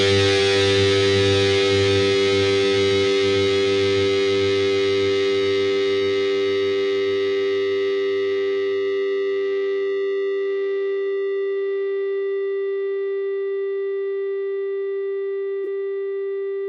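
AAC frame loss with concealment occurs from 15.64 to 15.67 s, a gap of about 21 ms, which fits a single lost frame. With that stretch of coded data missing, the decoder had nothing real to play and instead rebuilt the moment from the last spectrum it had received, altering signs or smoothing the energy across the gap. Because the dropout is so brief, it comes through as a momentary smeared, noisy or phasey patch in the sound.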